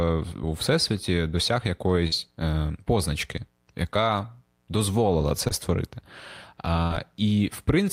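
A speech clip with short concealed packet loss at 2.07–2.23 s and 5.48–5.52 s. About 40 ms, then 20 ms, of audio arrived too late to decode. The receiver filled each gap by extending the preceding sound, leaving a brief smear.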